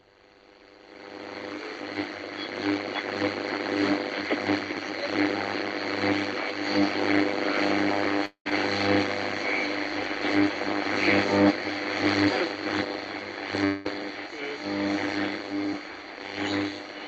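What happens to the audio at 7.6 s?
Nothing goes wrong at 7.6 s: the sound passes through intact, with only the steady band limit near 8 kHz that the Opus call path imposes throughout.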